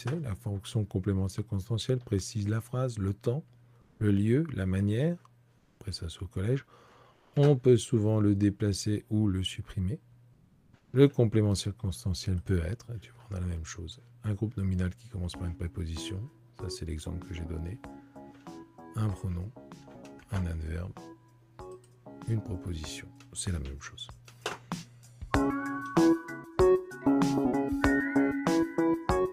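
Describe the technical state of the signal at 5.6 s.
From 5.57 to 5.79 s the background turns into a steady, featureless hiss about 3 dB quieter: comfort noise in place of the background, likely from discontinuous transmission.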